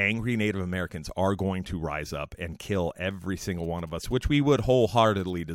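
From 3.40 to 5.30 s, GSM signalling bursts intrude. A nearby phone's radio bursts are rectified, giving a galloping dit-dit-dit of 217 Hz buzzes, roughly 30 dB below the speech.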